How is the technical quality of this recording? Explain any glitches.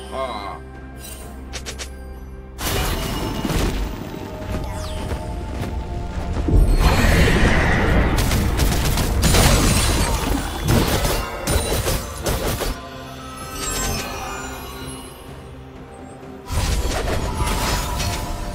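No glitches to report; nothing audible in the signal chain calls for comment.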